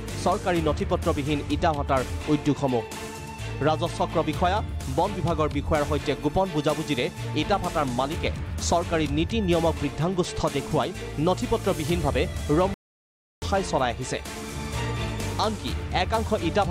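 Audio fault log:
12.74–13.42 s, playback stall: the sound stops abruptly in mid-flow and the output goes fully silent for about 0.68 s before resuming. The gap is not a fade or a dropout of a few samples but a sustained hold, the kind heard when a player's buffer empties or its audio thread is held up and nothing is written to the output. Starved or blocked playback is the likely cause, with output continuing once data flowed again.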